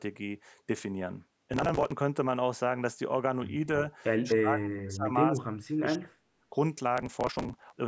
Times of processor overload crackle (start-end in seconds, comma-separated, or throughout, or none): 1.53-1.92, 6.98-7.76